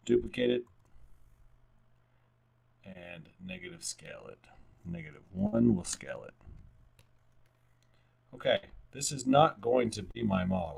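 Running through the whole clip is an overlap-add ripple. The audio was rebuilt from windowed frames whose overlap does not sum to a steady gain, so the level pulses by about 6 dB once per frame, at around 50 times a second. The result is a rough, buzzy tremolo rather than a slow wobble. It differs from the gaps below because it never stops and has no fixed position in time.

At 2.93 to 2.97 s comes a short concealed packet loss. About 20 ms of audio never arrived, and the receiver covered roughly 13 ms of it by extending the preceding sound before blending back into real signal. The effect is a tiny smear or wobble, far briefer than a dropout.

At 5.47 to 5.54 s and again at 8.56 to 8.65 s there is a burst of packet loss. Each time about 60 ms went missing. The receiver stretched the last sound across the hole for about 58 and 62 ms, letting it fade as the gap went on, so it is heard as a held buzz or dying hiss. 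The sound then resumes a little further on, with a short stretch skipped. Its length and the audible fade set it apart from the brief concealed losses.

At 10.11 to 10.16 s a second short concealed packet loss covers a 40 ms hole with about 36 ms of continued sound. This one is longer than the first, and it comes across as a brief smear or wobble, blending back into the real audio.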